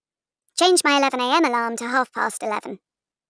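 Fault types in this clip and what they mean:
wrong sample rate: the speech runs 1.38 times fast and about 5.5 semitones high throughout, which fits 16 kHz audio played unconverted at 22 kHz.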